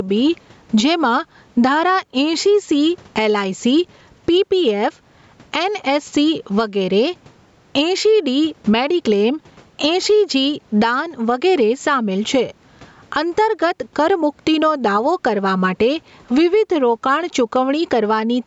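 Gain pumping throughout: the gain swings by around 15 dB under loud speech, likely from excessive mic gain driving a fast limiter.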